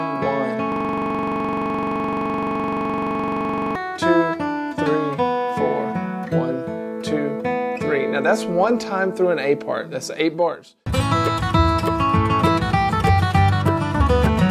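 The audio has a system hang loop from 0.72 s to 3.75 s. For about three seconds, one 42.67 ms slice of sound repeats exactly, around seventy times. The loop rate is 23.4 Hz. The length fits a 2048-sample buffer. The computer or driver stalled, and the sound hardware kept replaying that same ring buffer until normal playback resumed.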